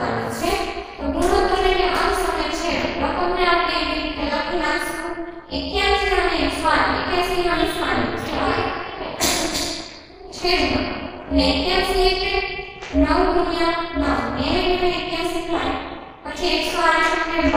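Throughout the clip, windowed frames were overlapped and summed at a spacing whose window gains do not add up to a constant. This is overlap-add ripple. The level swings by about 60 dB once per frame, at around 300 Hz, giving a harsh, metallic buzz with extra tones around each note.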